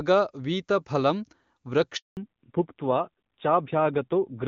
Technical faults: handover gap; fallback to narrowband

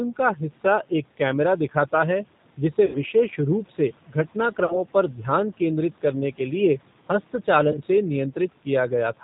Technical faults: G.729 codec; VoIP packet loss concealed by the speech codec

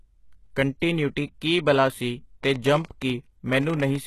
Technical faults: HE-AAC compression; train of clicks

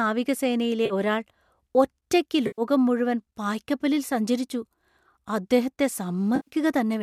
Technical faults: AAC frame loss with concealment

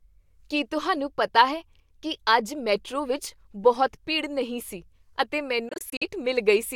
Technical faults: Bluetooth dropout

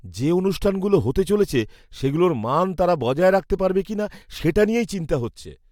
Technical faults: none

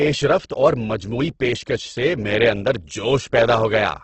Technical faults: Opus compression

